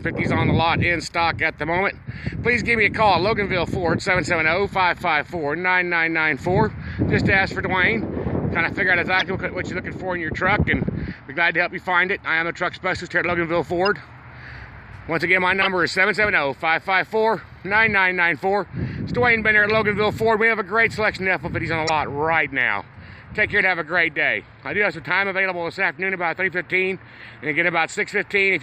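Brief bursts cut in at 9.19–9.27 s, 13.86–13.88 s, 15.62–15.67 s and 21.87–21.92 s. The second is much quieter; the others peak around -5 dBFS. Each is a corrupt frame decoded: flipped bits in compressed frames were played anyway, misplacing energy across frequencies.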